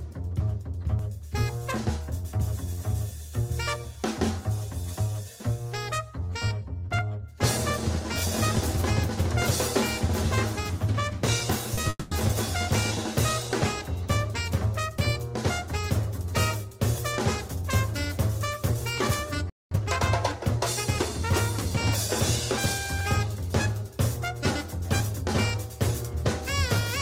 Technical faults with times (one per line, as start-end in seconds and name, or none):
11.75-11.85 short concealed packet loss
11.89-12.13 long network dropout
19.50-19.71 playback stall
19.71-19.91 time-compressed catch-up